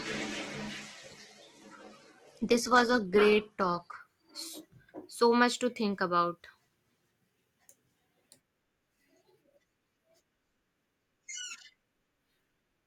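Adaptive stream starting at a low bitrate, 0 to 4.0 s: this speech opens on a thin, artefact-heavy version that fits 12 kbit/s Opus, then jumps without a gap to a fuller one suggesting 64 kbit/s once the player has gauged the connection. Nothing lies above 12.2 kHz.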